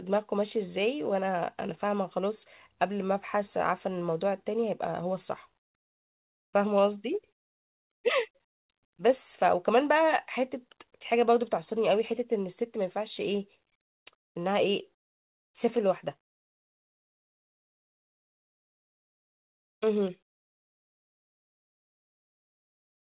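No technical faults are audible.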